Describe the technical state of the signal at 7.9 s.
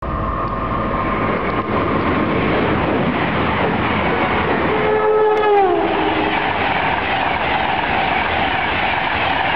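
At 7.9 s the signal is intact, with no audible fault at that moment.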